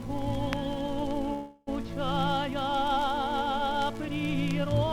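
Packets were likely delayed in transit, letting the receiver's jitter buffer run dry, which produces a call audio freeze from 1.33 to 1.69 s. For about 336 ms the last sound is stretched into a fading buzz or hiss that never drops to silence. When the flow resumes, the audio picks up where it stopped with nothing lost, so everything afterwards arrives about 336 ms later than it would have.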